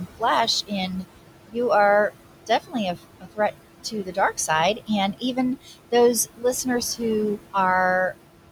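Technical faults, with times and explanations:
Throughout: noise suppressor artifacts. The steady room noise, sitting about 12 dB under the speech, is pulled down about 18 dB between phrases and rises back under them.
2.47–3.39 s, 3.84–5.74 s, 6.26–6.66 s: speech cut by the noise suppressor. Quiet speech parts mistaken for noise are dipped up to about 18, 16 and 14 dB. They total roughly a third, under half, and a tenth of a second, and sound swallowed.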